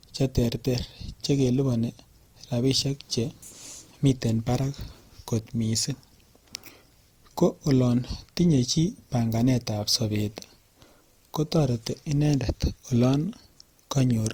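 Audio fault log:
throughout, transcoding between lossy codecs: two kinds of compression artefact are heard stacked on the speech, with nothing above 20.2 kHz, likely a low-rate MP3 re-encoded to Opus.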